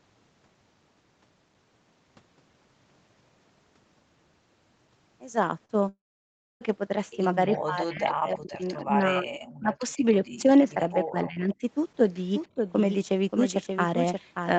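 At 5.65 s, a short concealed packet loss lasting about 40 ms leaves a brief smear where the receiver stretched the preceding sound.

From 5.89 to 6.63 s, a long network dropout, likely a stall in packet arrival, loses about 0.72 s. The last sound fades into roughly 0.63 s of silence before the audio resumes further on.

Between 7.65 and 10.05 s, the level sinks in pieces, by about 35 dB at worst. This is likely speech suppressed in double talk, with the echo canceller ducking the talker while the far side spoke. Similar dips follow from 10.41 to 11.64 s, reaching about 25 dB, and briefly at 12.55 s by about 10 dB.

Around that stretch, at 8.09, 8.80 and 10.24 s, faint scraps of the voice return about 280 to 295 ms late, roughly 20 to 30 dB down. This is likely an echo leak: loudspeaker pickup the canceller missed.

From 12.35 s to the end, what is likely a doubled audio track runs about half a second behind, only about 5 dB quieter. 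It starts abruptly and has no room colour, which tells it apart from the fragmentary echo. Throughout, the sound reaches no higher than 8 kHz, consistent with the Opus call path.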